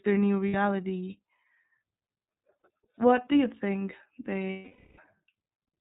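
Speech squeezed through the iLBC codec the whole way: nothing above 4 kHz, and a rough, slightly synthetic edge that fits the 13.3 kbps, 30 ms frame mode. There are also lost iLBC frames, where the decoder fills the gap by looping the last pitch cycle with noise. You hear a buzzy held vowel for about 60 ms at 0.48 s right after "their new", another 60 ms at 2.59 s just before "what do you think", and a much longer 480 ms stretch from 4.5 to 5.02 s after "what do you think" that fades out as it goes. Each time, the voice snaps back straight away because iLBC frames decode independently.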